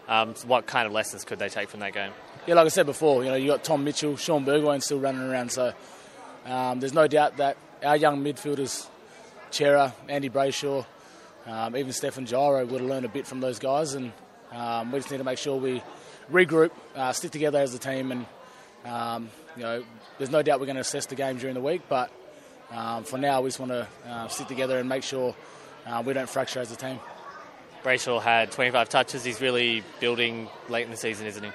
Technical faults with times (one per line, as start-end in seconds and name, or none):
0.00-31.54 MP3 compression